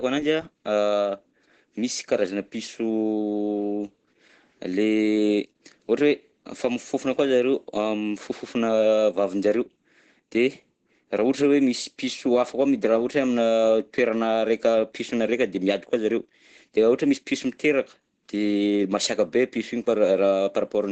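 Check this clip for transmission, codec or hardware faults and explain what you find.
There's one fault, and it runs the whole length of the speech: Opus voice compression. Nothing comes through above about 8.9 kHz, which points to the codec running in its wideband SILK mode at a low rate, something like 12 kbps. SILK models the voice with linear prediction and codes the excitation coarsely at that rate, so the damage is plainly audible: the voice sounds muffled, a bit hoarse, and slightly robotic throughout.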